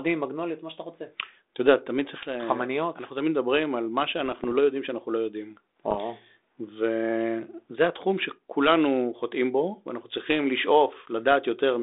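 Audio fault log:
4.26–4.55 s and 5.86–5.99 s, bit errors on an ADPCM link: pops and rough, crackly bursts with brief jumps in level. Flipped bits corrupt the decoder's step size and predictor, so each error rings on for milliseconds. The second burst is shorter but denser.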